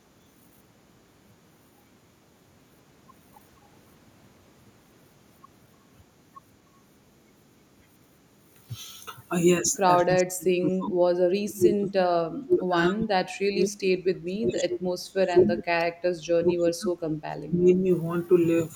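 At 9.66 to 9.77 s, a loudspeaker echo canceller likely failed to remove everything, so an echo leak returns a brief copy of the speech delayed by 222 ms, around 20 dB quieter. From 9.85 s, the canceller likely could not separate the near talker from echo during double talk, so speech is suppressed in double talk. The speech drops by roughly 30 to 35 dB in bursts at 9.85 to 10.97 s, 11.14 to 13.87 s, 14.25 to 15.8 s, 16.33 to 16.94 s and 17.3 to 17.86 s.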